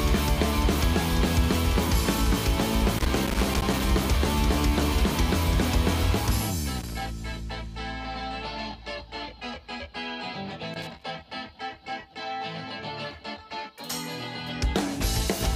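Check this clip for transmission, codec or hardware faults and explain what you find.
There's one hardware fault here, loose connector crackle, showing up three times: from 2.98 to 3.86 s, from 6.79 to 7.08 s, and from 10.74 to 11.03 s. The first burst runs just under a second, and the other two last about 0.3 s each. What you're hearing is a worn or dirty contact somewhere in the chain making and breaking as it shifts, so the signal gets chopped on and off in quick succession. That comes through as short, irregular bursts of crackle and scratching.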